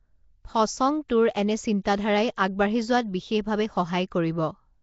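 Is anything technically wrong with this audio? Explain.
Yes. Two faults can be heard.

Nellymoser compression runs through the whole recording. The speech has a rough, hissy halo and a smeared, underwater quality, and nothing remains above 7.7 kHz. The likely cause is the Nellymoser Asao codec from Flash, at a setting consistent with a rate near 32 kbps. It codes short fixed blocks with very few bits per sample, so weaker frequency bands get no bits and are refilled with synthetic noise, which plainly roughens the sound.

Pre-echo occurs at 1.09 s. A short hiss of about 12 ms arrives just ahead of a sharp onset, and the attack itself sounds softened. The codec spreads its quantisation noise evenly across a whole block. When a sudden loud event lands late in that block, noise scaled for the loud part also fills the quiet moment before it, so the hiss is heard before the sound that caused it.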